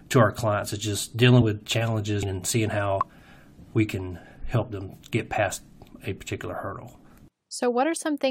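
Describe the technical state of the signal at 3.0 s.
An audible jump just after "with challenges and seeing", from 2.98 to 3.03 s: compressed frames skipped, dropping about 20 ms as the decoder jumps ahead.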